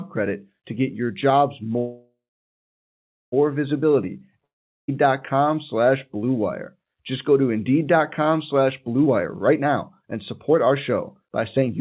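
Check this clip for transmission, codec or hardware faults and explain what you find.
Three faults are audible, all in how the audio travelled rather than in its coding. The band stops at 4 kHz, which fits a narrowband call codec such as G.711 mu-law.

From 1.78 to 3.34 s, right after "to get your jobs", there is a call audio freeze. The likely cause is delayed packets draining the jitter buffer. The receiver stretches the last sound into a fading buzz, then about 1.14 s of silence, before speech resumes where it stopped. The result is a 1.54 s gap with nothing lost. A spectrogram shows a smeared, fading band followed by an empty stretch, and the waveform drops to a flat line.

From 4.44 to 4.90 s a long network dropout occurs. The likely cause is audio that never arrived. The last sound is carried on briefly as a fading buzz, then about 0.40 s of silence follows. When the audio returns, roughly 0.44 s of speech is missing, so the sentence jumps ahead. 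On a waveform this is a short decaying tail and then a flat gap. A spectrogram shows blurred energy giving way to blank space, with an abrupt restart.

From 9.04 s to the end, a jitter buffer speed-up makes the speech run at 119% speed with unchanged pitch, so it sounds hurried. The buffer held more audio than its target and trimmed repeated pitch-period-sized pieces, around half a second in total. On a spectrogram, syllables and pauses look compressed in time while harmonic spacing stays the same. The waveform shows tighter syllable spacing with small splice points.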